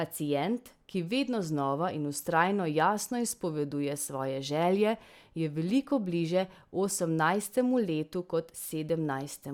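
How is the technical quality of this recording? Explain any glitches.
No technical faults or glitches can be heard in this speech recording.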